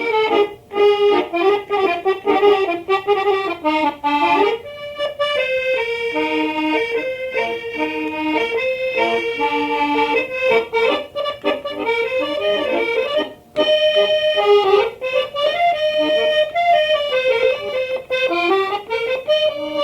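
No technical faults occur at any point in the audio.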